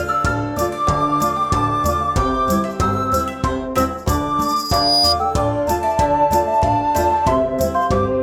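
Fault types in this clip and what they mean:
Loudspeaker feedback squeal: a microphone was picking up the loudspeaker it was feeding, and at one frequency the gain around that loop rose above one, so the signal kept amplifying itself. In this music clip it shows as a piercing tone near 4.9 kHz that swells over roughly half a second from 4.43 s, sits a few dB above the music, and stops at 5.17 s.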